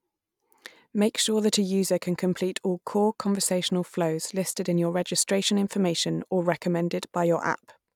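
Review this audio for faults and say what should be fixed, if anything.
No faults heard; nothing to fix.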